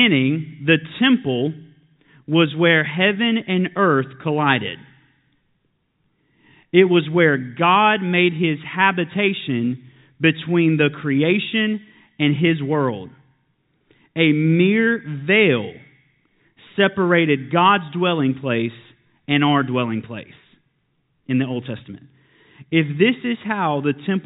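No faults can be heard anywhere in this speech recording. It comes through as G.711 telephone coding, with nothing above about 4 kHz and at most a faint quantisation hiss that rises and falls with the level of the speech.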